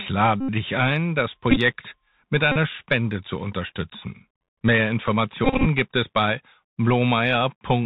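From the start the whole clip runs through the Bluetooth CVSD headset codec, and the damage is plainly audible. The speech sits inside a narrow band with nothing above 4 kHz. The one-bit up/down encoding, which fits a 64 kbps link, leaves a grainy hiss under everything. Sibilants come out scratchy, and loud bright bits distort where the step size can't keep up.

On top of that you get Bluetooth headset packet repeated dropouts. At 0.41 to 0.49 s, just before "dich ein das", about 78.8 ms goes missing and the headset keeps replaying its last packet. Repeating every 3.75 ms, that turns into a steady buzz near 267 Hz. At 1.51 to 1.57 s, right after "dich ein das", 41.2 ms is lost in patches over 60 ms, so the buzz comes in short bursts of up to roughly 15 ms. At 2.52 to 2.57 s, 41.2 ms is lost again and gives the same brief buzz. The worst is 5.45 to 5.66 s, just before "gibt es bei", where 142.5 ms is lost across 217.5 ms. 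It sounds like a stuttering buzz with runs of around 30 ms.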